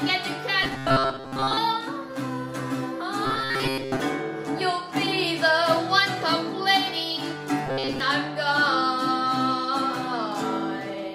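From 0.63 to 1.58 s, 3.25 to 4.00 s and 7.67 to 8.00 s, a rigid 133 Hz buzz replaces the sound. This is robotic sound from repeated short buffers, likely a 7.5 ms slice looped while most audio is skipped. Spectrograms show evenly spaced harmonic stripes, and waveforms show identical repeating cycles.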